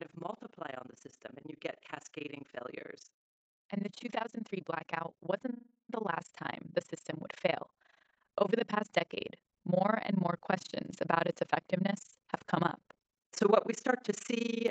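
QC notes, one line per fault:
throughout, overlap-add ripple: a harsh, robotic tremolo flutters through the whole clip at around 30 Hz, with level dips as deep as about 60 dB. The frames were windowed and rejoined with an overlap whose gains don't sum evenly, so loudness pulses once per frame.
0.13–3.03 s, 3.69–7.73 s, 8.35–11.02 s, automatic gain rising: speech and background swell together over several seconds, by about 4 dB, about 6 dB, then about 4 dB, the last ending just before "about its effectiveness have". The gain control judged the input too quiet and ramped its gain up.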